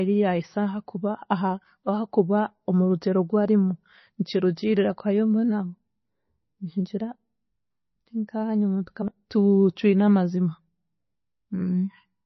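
Throughout, the speech sounds watery and swirly, with nothing above about 5.9 kHz. This is likely heavy MP3 compression at a bitrate around 24 kbps, where the encoder cuts the treble and drops weak frequency lines that flicker from frame to frame.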